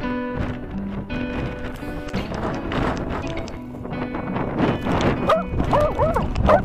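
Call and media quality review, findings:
Block of digital silence at 2.09 s (5.8 ms, fits a 256-sample buffer) and 5.81 s (4.4 ms). Hard cut to silence, heard as a tick or dip, not a faded or concealed dropout. Probable cause: output buffer underrun.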